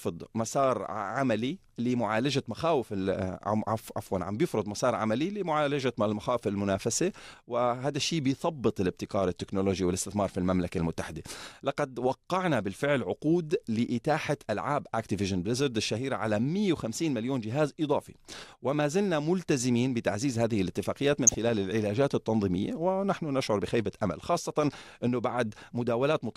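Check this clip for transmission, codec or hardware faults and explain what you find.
DAB burbling affects the speech at 17.06 s and again from 21.13 to 21.35 s. Weak reception lets bit errors, roughly 0.15 percent, slip past error correction into the MP2 data. Corrupted samples put short blips of noise in single sub-bands, and corrupted scale factors make sub-bands jump in level, heard as brief noise blips and level jumps.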